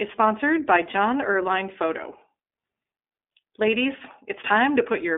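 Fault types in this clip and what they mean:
iLBC codec: thin, slightly rough and synthetic speech, nothing above about 3.7 kHz, from narrowband coding of independent 20 ms frames at 15.2 kbps.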